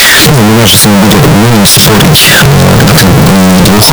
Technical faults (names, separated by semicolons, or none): signed and unsigned mixed up